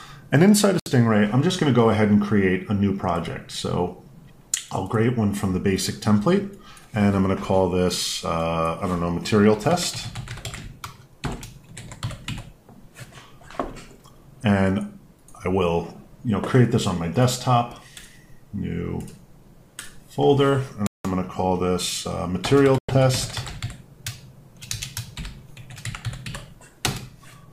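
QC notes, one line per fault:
0.80–0.89 s, 20.87–21.05 s and 22.78–22.95 s: Bluetooth stall. The sound drops to silence for 66 ms, 177 ms and 102 ms, then resumes. This is likely a wireless link whose packets were delayed, starving the playback buffer until the data caught up.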